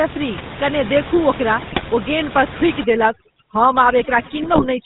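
From the start the speech carries the buzzy, gravelly roughness of the GSM full-rate codec, plainly audible throughout and consistent with its 13 kbps rate. The codec rebuilds the voice from a vocal-tract filter fed by a sparse, regularly spaced pulse excitation, so fine detail is lost and nothing above 4 kHz survives. A spectrogram shows a hard ceiling at 4 kHz and smeared, grainy harmonics below it.

From 1.60 to 1.84 s, GSM bit errors break the voice into squawks and gargling pops. Corrupted bits reached the decoder, and wrong filter, pitch and gain values distorted the spectrum and level frame by frame; the 0.24 s span fits about a dozen 20 ms frames. The waveform shows sudden jagged level jumps, and the spectrogram shows blocky, frame-wide bands of misplaced energy.

From 2.84 s to the end, overdone noise removal takes hold. The room noise, about 13 dB below the speech, is gated down to near silence with twinkling specks, and the quieter parts of the voice are cut along with it. 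On a spectrogram the background turns black with scattered isolated dots, and the speech harmonics look patchy and moth-eaten.

From 4.42 to 4.67 s, GSM bit errors return. This burst has a higher bit error rate than the first, 2.34% against 1.48%, with the same pops and squawks, jagged waveform spikes and blocky spectral smears.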